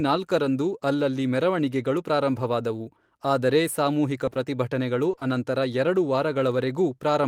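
Short concealed packet loss occurs at 4.25, 4.29 and 4.33 s, and again at 5.11, 5.15 and 5.19 s, just before "ಅನಂತರ ಎರಡು". Each time, 20 ms of speech failed to arrive, and the receiver extended the preceding sound to cover it, leaving a brief smeared wobble.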